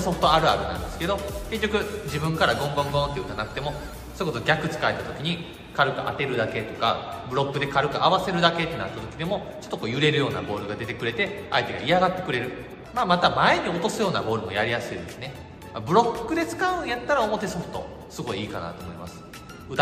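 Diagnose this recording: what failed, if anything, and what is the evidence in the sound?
Nothing failed in this recording, and the sound gives no evidence of a fault at any stage.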